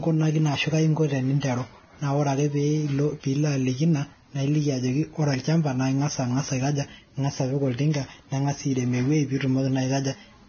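From start to finish, the speech is hissy and grainy. Nothing is heard above 6.5 kHz, so the top end sounds dull and boxed in. The treble that remains is rough, with fine detail turned into a noisy wash. Onsets of consonants smear instead of landing crisply. The likely cause is heavy Vorbis compression. The damage points to a very low bitrate of around 18 kbps. At that rate the encoder cuts the treble and quantises what remains so coarsely that the detail becomes noise.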